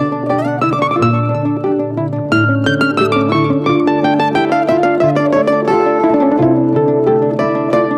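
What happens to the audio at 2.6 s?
Nothing goes wrong at 2.6 s: the music plays through that moment intact, with no dropout, click or other fault.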